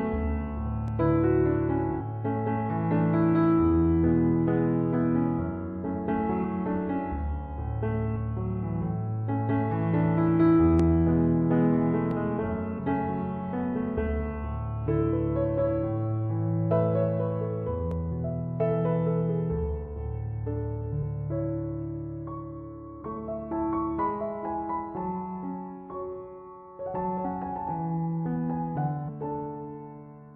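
At 0.88 s a single sharp click cuts across the audio, a thin vertical line from top to bottom of the spectrum. It is most likely dropped samples: well under a millisecond missing from the stream, so the waveform steps straight from one value to a later one. The same click returns at 10.80 s, 12.11 s and 17.91 s, each time too brief to remove any audible sound.

At 6.43 s the audio jumps forward by about a tenth of a second. This is compressed frames skipped: a few whole frames of 23.2 ms each were never decoded. Larger skips of around a fifth of a second occur at 12.77 s, 23.01 s and 27.24 s. At 29.07 s roughly half a second is lost, the largest jump forward in the clip.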